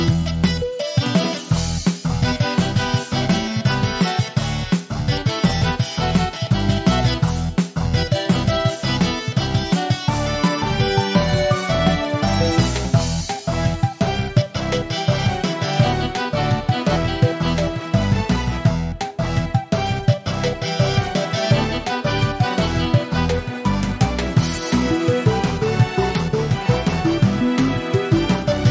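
No technical faults occur at any point in time; the call microphone processing trims the lowest bass and leaves nothing above 8 kHz, which is normal for that path.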